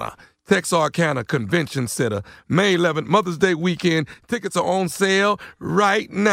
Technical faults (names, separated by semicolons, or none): one channel drops out